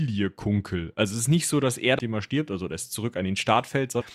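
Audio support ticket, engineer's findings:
Damaged data in compressed stream: corrupt frames break decoder sync until next header. Chirp, click or gap at 1.98 s (after "nicht so dass er") and 4.00–4.02 s.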